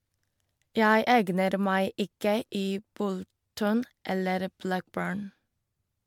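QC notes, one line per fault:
Throughout, generation loss: the speech sounds swirly, smeared and hollow, with blurred consonant attacks and nothing above 19.9 kHz. This is likely from about seven MP3 passes near 136 kbit/s, each requantising on a shifted frame grid so noise and spectral holes accumulate.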